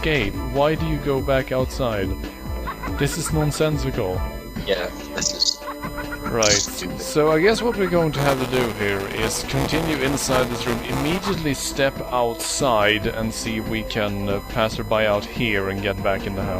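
USB whine runs through the whole clip as a steady tone at 1 kHz, about 20 dB below the signal. Current drawn by the USB bus in 1 ms frames leaks into the audio path through power or ground and produces this fixed-pitch tone.

Buffer tearing occurs from 8.17 to 11.31 s and is heard as a robotic buzz at 200 Hz. The writing program and the reading hardware have slipped, so in every period about 15 percent of the audio comes from roughly 10 ms earlier, with hard joins on both sides.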